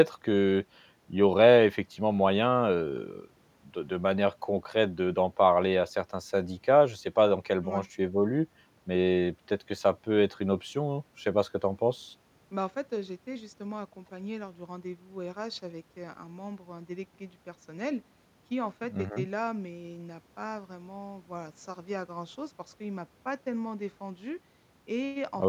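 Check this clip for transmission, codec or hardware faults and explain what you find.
No faults detected in this recording.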